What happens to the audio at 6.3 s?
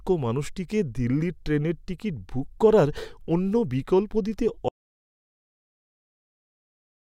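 At 6.3 s you're inside an audio dropout to silence that starts at 4.69 s, right after "করার অন্য বিকল্প দিতে", and runs all the way to the end of the clip. The speech cuts off mid-flow and what follows is dead digital silence, with no room tone or hiss at all. That's most likely the input being lost (a disconnect, failed link or stray mute) while the recorder kept writing silence, so anything said after that point is simply gone.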